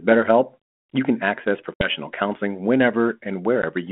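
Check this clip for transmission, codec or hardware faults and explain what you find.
Two dropouts point to packet loss on an ADPCM call, carried over a 200 to 3400 Hz telephone band consistent with 32 kbit/s G.726.

At 1.74 to 1.89 s, just after "you can access", about 60 ms of audio, several packets' worth, goes missing, and around 3.62 to 3.65 s roughly 10 ms, about one packet, goes missing. Each gap is filled with silence. The decoder's adaptive predictor and step size lose track of the sender's, so the sound resumes slightly distorted before settling. On a waveform these appear as flat, hard-edged holes, and on a spectrogram as vertical blank bands.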